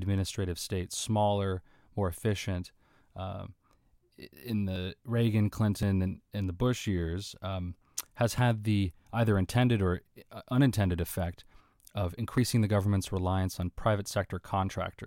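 At 4.76, 5.83, 8.38 and 12.38 s the speech skips ahead by about 20 ms with no gap, likely a dropped buffer (overrun) overwritten before capture.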